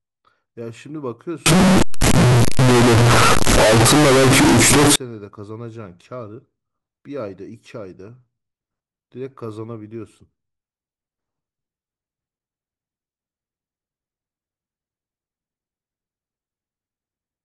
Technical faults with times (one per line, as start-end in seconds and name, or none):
1.46-4.96 float read as integer